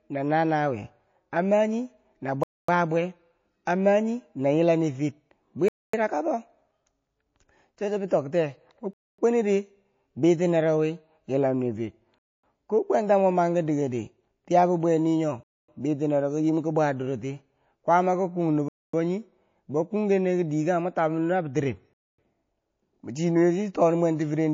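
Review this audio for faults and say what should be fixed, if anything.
MP3 compression runs throughout: the speech sounds watery and dull, with swirling, missing treble. The likely cause is low-bitrate encoding that discards weak frequency lines, which fits about 32 kbps. Encoding at a higher bitrate would prevent it.

Gaps between chunks, each a silence of 0.25 s, start at 2.43, 5.68, 8.93, 12.18, 15.43, 18.68 and 21.93 s. They fall after every 3 s of audio, where consecutive chunks were joined with dead air between them. Playing the chunks back to back, with padding trimmed and no late start, would prevent them.

Pre-echo occurs from 8.08 to 8.11 s, where a hiss about 12 dB louder precedes a sharp attack for 27 ms. The encoder spread that attack's quantisation noise across a 72 ms block because it never switched to short blocks. Enabling short-block switching on transients would prevent it.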